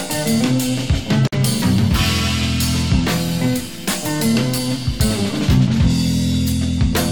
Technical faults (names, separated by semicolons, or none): gap at a join of encoded pieces